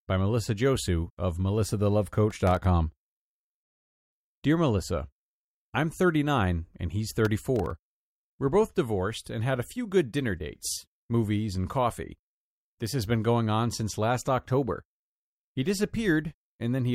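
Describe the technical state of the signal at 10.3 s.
At 10.3 s the speech signal is intact, with no technical fault present at that moment.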